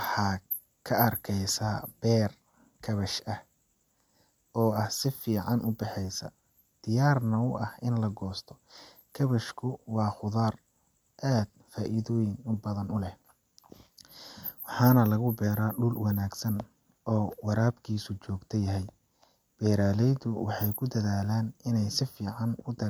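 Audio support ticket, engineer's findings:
Engineer's findings: no audio fault found on this ticket.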